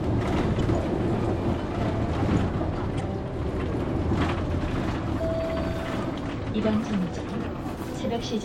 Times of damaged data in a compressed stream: 0.56-0.61, 2.97-3.01

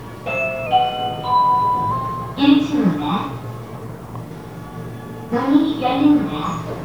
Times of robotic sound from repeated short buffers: none

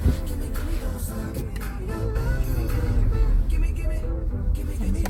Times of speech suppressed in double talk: none

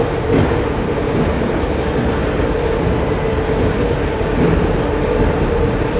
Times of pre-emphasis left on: none

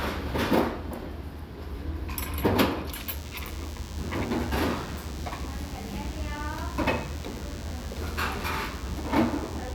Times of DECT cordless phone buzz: 2.92-9.75

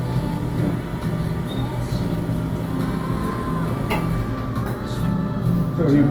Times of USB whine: none

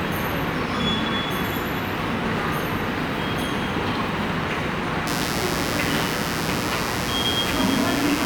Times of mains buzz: 5.07-8.25

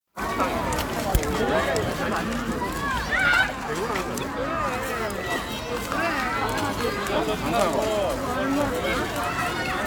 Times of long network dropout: none

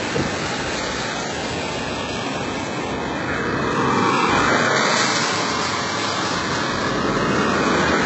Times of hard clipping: none

